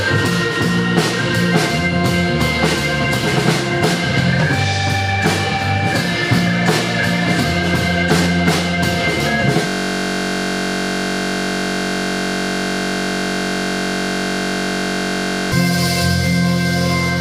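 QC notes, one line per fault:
9.67 to 15.52 s, system hang loop: The system froze and the hardware kept replaying one 21.33 ms slice of audio, which fits a 1024-sample buffer. It repeats about 270 times. At 46.9 Hz the loop sounds like a steady buzz.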